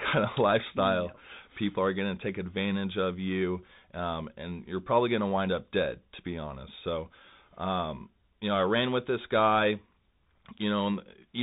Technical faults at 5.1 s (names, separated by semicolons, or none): Bluetooth CVSD headset codec